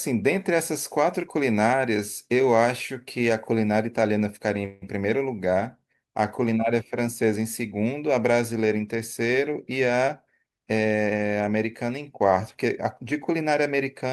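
At 4.65 s the speech stalls into a short buzzing or hissing continuation of the last sound, which fades over about 163 ms before the talker carries on at 4.84 s. Nothing is skipped; the gap is inserted, so everything after it arrives 163 ms later. This is a call audio freeze, likely caused by packets held up in transit until the jitter buffer ran dry, with the receiver stretching the final sound to cover the wait.

From 10.43 s to 11.65 s the speech sounds hurried, running at about 111% of normal speed while the pitch stays unchanged. This is a jitter buffer speed-up. The buffer was holding more audio than its target. To work that backlog down, the receiver cut out many tiny slices of one or a few pitch periods each. Together they come to roughly 150 ms, which compresses the timing without shifting the pitch.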